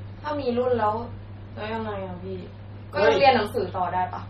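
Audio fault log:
Throughout, MP3 compression: the whole thing has a watery, swirly quality, and nothing comes through above 14 kHz, so the top end just stops dead. That's likely an MP3 encoder starved of bits. It chops the treble at a fixed point and drops the quieter frequency detail, which then flickers in and out from frame to frame. The damage is heavy, so the s sounds get chirpy and metallic and attacks come out smeared, which fits a low bitrate around 32 kbps.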